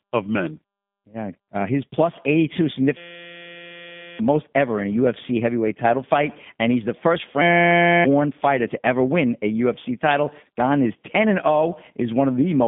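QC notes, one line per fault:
Throughout, G.729 codec: speech comes out plainly rough and synthetic, rebuilt from a filter plus sparse pulses at what sounds like 8 kbit/s, with nothing above 3.7 kHz.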